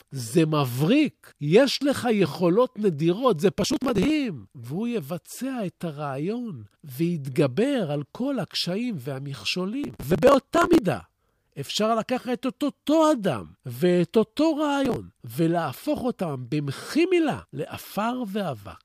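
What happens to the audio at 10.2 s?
At 10.2 s the speech is caught in a burst of processor overload crackle. It runs from about 9.84 s to 10.79 s. The processor falls behind and misses its deadline for one small buffer after another, dozens of them in quick succession. The spacing points to buffers of around 10 ms. Each missed buffer is simply skipped, leaving a tiny hard-edged gap. Packed together, these gaps produce a gritty, tearing crackle over the speech until the load eases.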